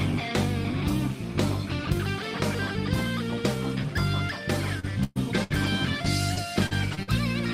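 At 4.79 to 4.92 s there is a short concealed packet loss: about 40 ms of audio never arrived, and the decoder bridged it by extending the preceding sound before blending back into the real signal, leaving a brief smear.

Two bursts of packet loss follow. From 5.04 to 5.18 s about 120 ms is missing; the receiver holds and fades the last sound, then drops to roughly 10 ms of silence before resuming. From 5.44 to 5.52 s a further 60 ms goes missing, heard as a shorter held, decaying tail with the material skipped.

Lost packets rebuilt from error correction appear at 5.50 and 5.64 s, each 20 ms. The following packet carried a low-bitrate copy of the lost one, so there is no gap, only a momentarily rougher, noisier texture.

Between 6.34 and 7.09 s there is repeated packet loss, producing a robotic sound. Four separate dropouts, the longest 45 ms, remove about 120 ms of audio. Roughly 70 ms of that is rebuilt by continuing the last sound, leaving the stretch choppy with pieces missing.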